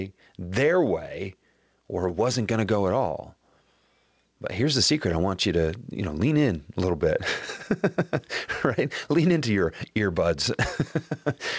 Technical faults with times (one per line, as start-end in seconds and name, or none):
0.00-11.58 gain pumping